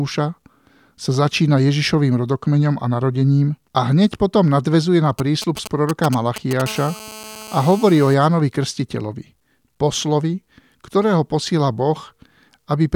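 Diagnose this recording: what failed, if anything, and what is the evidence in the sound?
GSM signalling bursts got into the analogue wiring at 5.19 to 6.62 s. You hear galloping ticks and short 217 Hz buzzes where the circuit rectifies a nearby 2G phone's radio bursts.

GSM phone buzz follows at 6.66 to 8.14 s. It's a steady, raspy 217 Hz buzz about 18 dB under the speech, from the same phone now holding a call.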